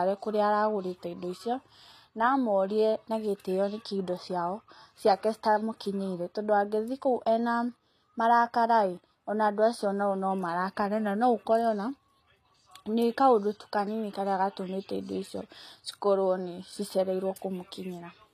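From start to finish the speech has a gritty, metallic sheen on its s sounds, a lisping edge to sibilants, and nothing at all above 14.9 kHz. This is likely HE-AAC compression, with damage plainly audible and at a level that fits a bitrate around 24 kbps. Only the lower spectrum is coded; the treble is rebuilt by copying lower bands upward, so its harmonics fail to line up and the top end sounds synthetic.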